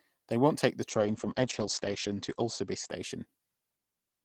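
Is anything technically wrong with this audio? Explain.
Yes. From 0.91 to 3.75 s, just after "won't take the", a call bitrate drop makes the speech rough and muffled, with the top end cut to 8 kHz for about 1.3 s. The sound suggests the encoder was squeezed from roughly 32 to 9 kbps, unlike packet loss's abrupt gaps.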